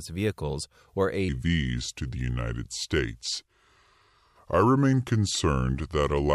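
At 1.29 s, just after "vehicles or", the speech drops into a section at the wrong speed that runs to the end of the clip at 6.34 s. Playback there is at 0.783 times the original rate, so timing stretches and pitch falls together, by roughly four semitones. The voice turns abruptly deeper and slower at that point. The likely cause is that this section was played or edited against the wrong clock rate.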